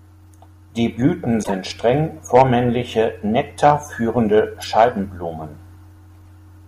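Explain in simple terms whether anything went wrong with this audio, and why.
Two brief squeaky, noisy blips cut into the speech, from 1.43 to 1.51 s and from 4.58 to 4.65 s, the first clearly louder. This is a corrupt frame decoded: a few compressed chunks of the recording were damaged, and the player played them anyway, producing noise instead of speech.

Three short harsh, crackly spots on loud moments, at 2.35 to 2.42 s, 3.65 to 3.72 s and 4.78 to 4.84 s, are hard clipping. The sound was too strong for the recording chain to handle, so its loudest peaks were chopped flat, adding that rough edge.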